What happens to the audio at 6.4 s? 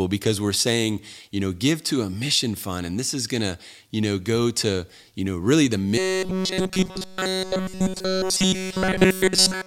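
From 5.98 s, right after "you know really the", through to the end, the speech goes robotic: a rigid metallic buzz near 188 Hz, likely from short buffers being repeated continuously.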